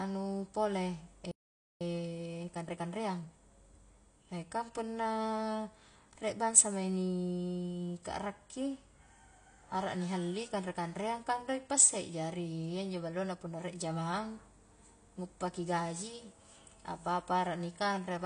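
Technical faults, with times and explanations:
Throughout: AAC compression. The speech sounds dull and smeared, with a fizzy, warbling edge on sibilants. Nothing is present above 9.8 kHz. This is likely a low-bitrate AAC-LC encode, and the sound fits roughly 32 kbps. The encoder lowered its cut-off and quantised the remaining bands coarsely.
1.31 to 1.81 s: playback stall. The speech stops dead in mid-flow and the output goes silent for about half a second. It then resumes. The likely cause is a player that ran out of data or was blocked, leaving nothing to play until it recovered.
1.81 to 3.77 s: time-compressed catch-up. Right after the gap, the speech runs at 1.25 times normal speed while keeping its normal pitch. It sounds hurried. The player is cutting out small pieces and cross-fading them to clear its backlog.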